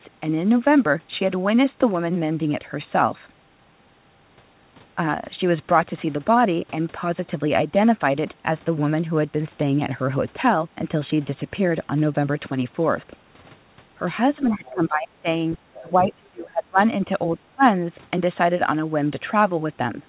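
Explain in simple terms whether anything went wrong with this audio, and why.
The speech dips and partly cuts out at 14.35–15.27, 15.58–16.78 and 17.31–17.63 s. This is speech suppressed in double talk. Both sides likely spoke at once, so the echo canceller turned this talker down too.

From 14.66 to 14.71 s, a faint scrap of the other side's voice leaking through can be heard. The echo canceller likely missed removing it.

The call path itself carries nothing above 4 kHz, which is normal for a phone line.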